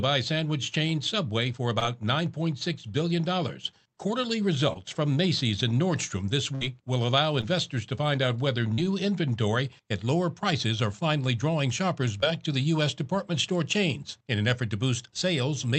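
At 1.79 s there's a short concealed packet loss: about 20 ms of audio never arrived, and the receiver papered over it by extending the sound just before. You hear a tiny smear or wobble. The same happens at 4.73 s.

From 6.55 to 6.63 s comes a burst of packet loss, roughly 60 ms gone in one go. The receiver keeps the last sound going while fading it down, so you get a brief held buzz or hiss, then the audio picks up further along with that bit missing.

More short concealed losses follow at 7.41 s and 12.21 s, each about 20 ms. A slightly longer one runs from 8.74 to 8.85 s, where around 40 ms dropped out. All of these come across as quick wobbles or smudges.

Throughout, the top end stops around 8 kHz, which points to the Opus call codec's band limit.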